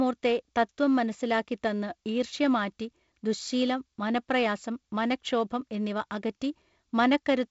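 Nothing in this speech goes wrong at any point; it comes through G.722 wideband telephone coding at 48 kbit/s, so the sound tops out around 7.7 kHz and carries the light coding texture you'd expect at that rate.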